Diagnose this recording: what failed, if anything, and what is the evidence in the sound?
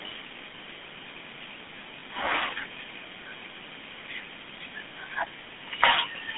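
The codec stage failed audibly. The GSM full-rate codec is present for the whole clip. The speech has a buzzy, gravelly roughness throughout. The band runs from about 150 Hz to 3.5 kHz, so the top end is gone. The codec rebuilds each voice from a vocal-tract model driven by a thinned pulse excitation. That coarse excitation causes the grit. The damage is plainly audible and fits 13 kbps GSM full rate.

At 2.00 to 2.02 s, the network or radio link shows lost GSM frames. The speech turns briefly rough and metallic, then recovers. The decoder had no valid data for that slot. It reused the previous good frame's settings. The resulting held ring lasts about 20 ms, which points to a single dropped frame. The room noise sits about 32 dB below the speech.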